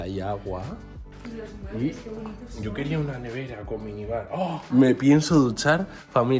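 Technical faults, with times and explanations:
No technical faults detected.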